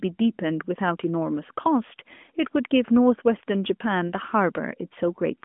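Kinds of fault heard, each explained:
Lost AMR speech frames: Radio errors corrupted a frame so it failed its checksum, and the AMR decoder filled the gap by repeating the last good pitch and vocal tract settings at reduced gain. Here it sounds like a single brief dip or warble in the speech from about 4.08 to 4.11 s, a gap of about 20 ms, which fits one lost 20 ms frame within the narrowband mobile call.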